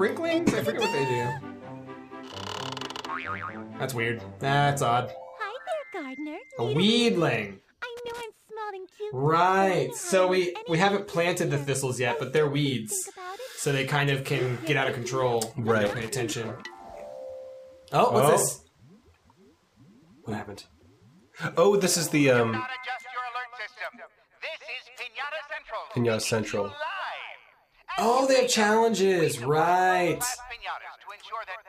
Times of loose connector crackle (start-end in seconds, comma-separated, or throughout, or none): 7.97-8.21, 15.86-16.09